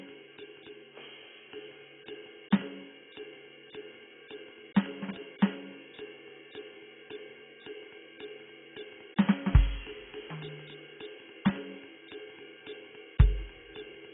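Music with heavy AAC compression throughout. A spectrogram shows a hard ceiling at 3.7 kHz, and the sound is dull and smeared, likely from AAC-LC around 16 kbps.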